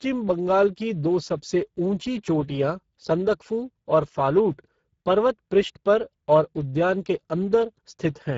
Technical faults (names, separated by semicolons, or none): Speex codec